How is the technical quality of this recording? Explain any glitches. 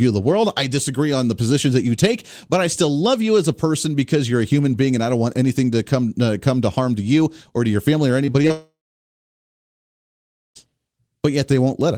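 Two network faults break up the speech near the end, in quick succession.

Repeated packet loss (robotic sound) runs from 8.25 to 8.51 s. Four short holes, the longest 27 ms, were each filled by stretching the preceding sound. Around a third of that stretch is patched this way, giving a choppy, robotic texture.

A long network dropout follows from 8.51 to 10.59 s, likely caused by the connection stalling. About 2 s of audio never arrived. The last sound is briefly continued, then about 1.8 s of silence remains before the speech resumes without the lost portion.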